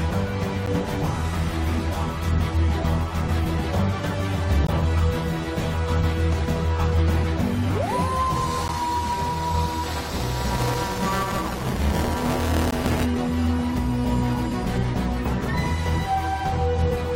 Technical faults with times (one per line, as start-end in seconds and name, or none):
0.66 gap between stream segments
4.67 gap between stream segments
8.68 gap between stream segments
9.83-13.05 buffer tearing
12.71 gap between stream segments